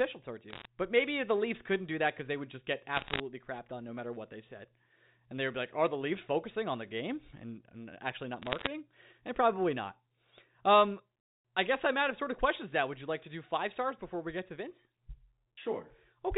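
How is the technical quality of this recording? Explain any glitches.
The recording has three short bursts of bit errors on a digital phone line, heard as ticks and crackle on a telephone-band speech signal. They land at 0.50 to 0.65 s, at 2.96 to 3.20 s between "they would just get" and "crapped on no matter", and at 8.42 to 8.67 s right after "and and actually not". In each burst, roughly one bit in a hundred or fewer got flipped on a G.711 link. A flip damages a single sample, and a flip on a high-order bit, or on the sign bit of a loud sample, throws it far off, producing a sharp tick.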